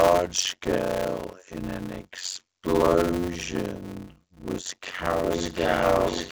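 A block size mismatch (padded) runs through the whole recording. One stage hands on blocks shorter than the next stage expects, which fits 256-sample blocks being read into larger ones, with the empty remainder filled with zeros. Each block therefore carries a short silent gap, and these repeat as a steady buzz at 91.9 Hz under the speech. The padding also stretches the audio, so the speech runs at 0.533 times its normal speed while keeping roughly its usual pitch.

From 5.23 s to the end of the recording, a feedback howl takes over. Two devices in the same room are on the call, and the path from loudspeaker back into microphone adds level on each pass. The repeats grow rather than die away and narrow to a tone of around 3 kHz. It pulses roughly every 0.4 s, the delay around the loop, and peaks about 6 dB above the speech. The call codec's cutoff at 7 kHz leaves the howl well within the band.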